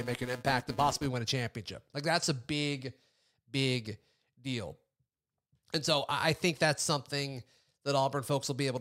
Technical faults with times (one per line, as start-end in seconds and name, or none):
0.00-1.06 filter restarted on every block